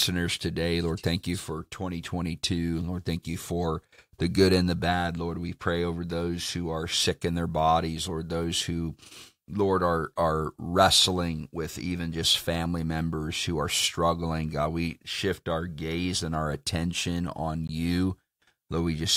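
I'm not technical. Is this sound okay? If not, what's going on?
No. At about 17.68 s there's a brief tick or pop in the speech. It's a block of digital silence: for 16 ms the sound is replaced by total silence, cutting out and back in abruptly with no fade.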